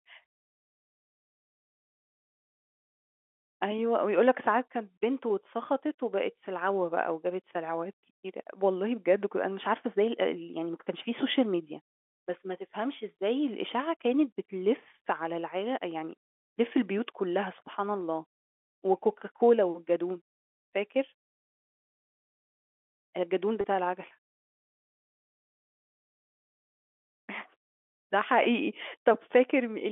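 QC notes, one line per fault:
23.61–23.64 s, packet loss with pitch repetition: a single dropout of about 30 ms, consistent with one lost packet, is bridged by the receiver looping the most recent pitch period of the speech. Because the gap is short, the concealment never reaches the fade to silence; it is heard as a brief held, slightly buzzy tone before normal speech resumes through a quick cross-fade, with the narrow telephone band of the G.711 path unchanged around it.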